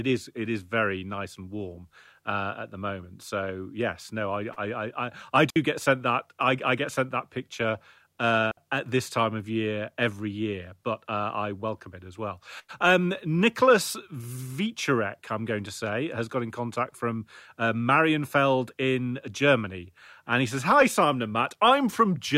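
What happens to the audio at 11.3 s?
Nothing goes wrong at 11.3 s; the speech carries on intact through that moment, with no dropout, click, glitch or other fault to be heard.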